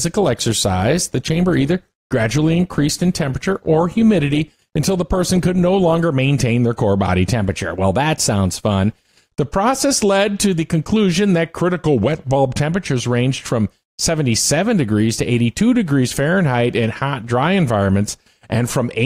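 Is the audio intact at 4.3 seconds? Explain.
No. At 4.3 seconds the treble is dull or sounds synthetic and codec artefacts are strong, until quality jumps at 6.0 s with no gap. This is an adaptive stream starting at a low bitrate: the player began on a cheap version, pointing to around 24 kbit/s Opus, then switched up, to about 64 kbit/s, after measuring the connection.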